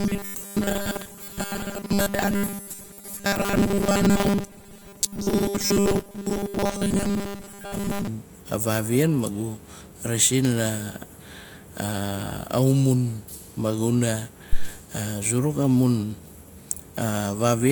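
From 0.01 to 8.08 s the voice turns into a rigid, metallic buzz pitched at 200 Hz, still loosely following the shape of the speech. This is robotic sound from repeated short buffers, likely caused by audio arriving too seldom, so the playback side keeps re-sending the last fragment while the real signal is skipped. A 200 Hz buzz fits a fragment about 5 ms long, and most of the sound in this stretch is repetition rather than fresh audio.

At 14.53 to 14.70 s a short, deep thump breaks in, with its body dying away over about 40 ms. This is a phantom power thump: a supply being switched on a live input sends a sudden voltage step through the coupling capacitors, and the input reproduces that step as a low-frequency bump rather than anything the microphone picked up.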